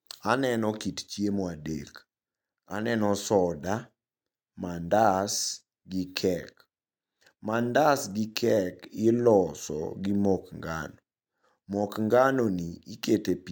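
No technical faults are audible.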